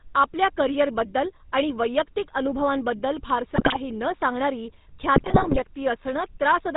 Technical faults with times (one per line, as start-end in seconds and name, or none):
0.00-6.76 GSM full-rate codec
3.56-3.77 GSM bit errors
5.16-5.59 GSM bit errors